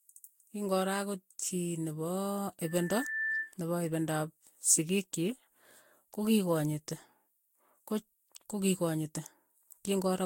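Right from the start the whole clip has that swirly, hollow quality, with consonant attacks smeared and a watery shimmer under the speech, and nothing above about 16.6 kHz. That's likely generation loss: the audio was decoded and re-encoded several times, probably around four passes through a lossy codec. The character points to Vorbis at roughly 65 kbit/s each time. Every pass quantises on a shifted frame grid, so the damage piles up well beyond what one encode at that bitrate would do.

Then from 2.64 to 3.54 s there's a loudspeaker feedback squeal. A single tone at 1.8 kHz swells up over about half a second until it sits roughly as loud as the speech, then stops. That's a mic hearing its own speaker, with the loop gain at 1.8 kHz tipping over one, so that frequency keeps feeding itself and grows into a howl.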